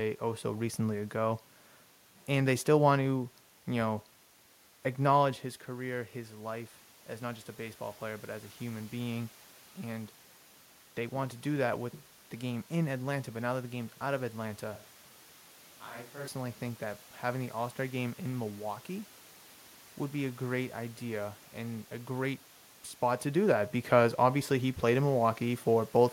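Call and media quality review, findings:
Automatic gain rising, 5.67–8.92 s: after the level drops about 10 dB near 5 s as the talker moves back, AGC lifts gain about 4 dB. The waveform envelope and noise floor swell gradually together.

Sudden hollow, roomy sound, 14.76–16.28 s, roughly 10 dB quieter, room noise only about 25 dB down: likely a switch to a distant microphone. The spectrogram shows abrupt low-end loss and a raised floor.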